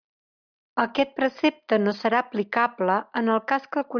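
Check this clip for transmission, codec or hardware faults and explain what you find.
I found no transmission, codec or hardware faults in this clip.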